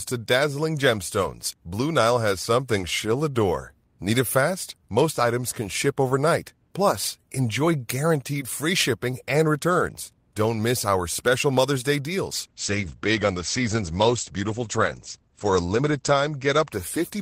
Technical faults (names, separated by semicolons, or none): call bitrate drop